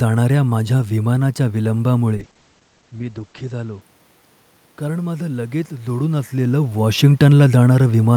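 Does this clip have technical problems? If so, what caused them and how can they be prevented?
Yes. A call bitrate drop runs from 2.16 s to 3.87 s. The speech turns rough and watery, and the top end disappears, with the audio bandwidth shrinking from about 20 kHz to 8 kHz. That points to the bandwidth estimate falling and the encoder being pushed from about 64 kbps down to roughly 11 kbps. At that rate it codes coarsely and discards the highs. The worst stretch lasts about 1.36 s before the bitrate recovers. The level shift near 2 s is the talker moving, not part of this fault. To prevent it, give the call a stable, uncongested network path with enough headroom, and set a sensible minimum bitrate so congestion control cannot starve the encoder.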